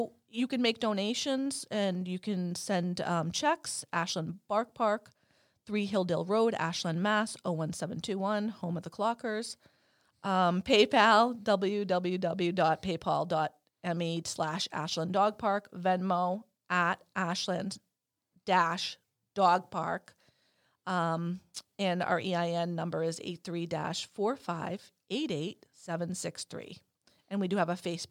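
No technical faults are audible.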